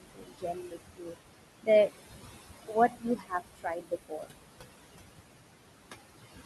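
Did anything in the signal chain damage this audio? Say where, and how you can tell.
Yes, in call processing. Noise suppressor artifacts run throughout: the room noise, about 9 dB under the speech, is pulled down by about 20 dB between phrases and returns beneath them. On a spectrogram the noise floor appears mottled and blotchy, not smooth.

The same noise suppressor also cut speech at 0.0–0.77 s, 0.93–1.17 s, 2.67–3.33 s and 3.55–4.33 s. Weak speech parts there were taken for noise and dropped by about 20 to 22 dB, so they sound faint or swallowed. On the waveform these spans show sudden dips, and the spectrogram shows missing low-level detail.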